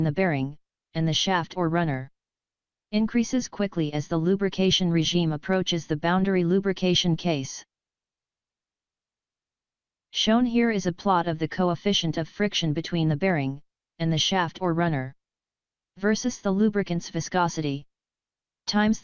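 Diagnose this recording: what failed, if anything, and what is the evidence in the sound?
Nothing failed at any stage; no fault is audible.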